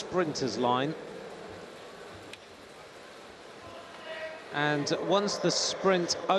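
No technical faults can be heard anywhere in this recording.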